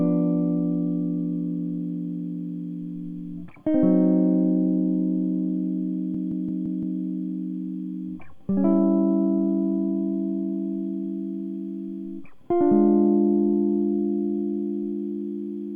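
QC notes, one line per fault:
6.14–7.00 s, system hang loop: one 171 ms slice of music repeats identically five times, a 5.9 Hz machine-gun stutter, suggesting an 8192-sample buffer recycled while the system froze.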